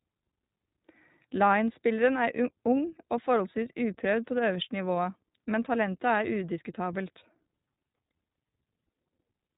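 From start to finish the speech carries iLBC codec damage, plainly audible throughout. Nothing above about 3.8 kHz survives, so sibilants and consonant edges sound dull and boxed-in. Each short block of excitation is coded independently of the one before, which gives the speech a rough, slightly synthetic grain as the excitation is rebuilt block by block. The coarseness fits the 20 ms frame mode at around 15.2 kbps.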